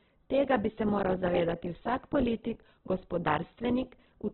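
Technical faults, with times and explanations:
throughout, Opus compression: Nothing remains above 4.1 kHz, and the speech sounds rough and grainy. Likely an Opus encoder in music mode, starved near 8 kbps.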